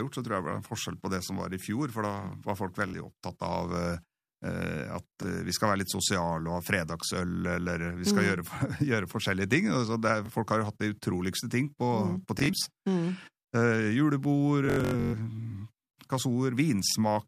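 Bluetooth stutter occurs at 2.88 to 2.94 s (between "var folk" and "opptatt av"), 5.23 to 5.26 s (before "vi skal være litt"), 10.26 to 10.3 s (before "folk har jo hatt"), 12.39 to 12.67 s, 14.66 to 15.14 s and 16.9 to 16.96 s. Late or missing packets made the receiver replay its last slice, which fits slices of about 21 ms. Short gaps sound like a brief buzz. The 12.39 s and 14.66 s stretches scatter repeats over 256 ms and 469 ms, up to 128 ms in a row, and become a machine-gun stutter. The sound then jumps ahead. On a waveform, identical short blocks repeat. On a spectrogram, a frozen spectral slice stripes horizontally, with comb-like bands at about 47 Hz spacing.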